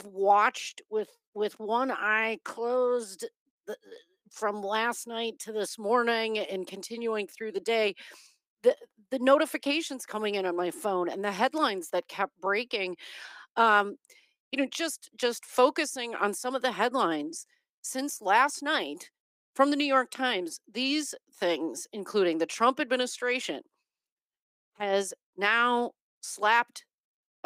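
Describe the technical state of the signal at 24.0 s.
Around 24.0 s the signal is intact, with no audible fault at that moment.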